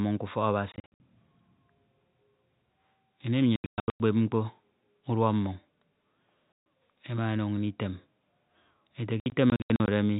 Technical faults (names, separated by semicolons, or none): packet loss filled with silence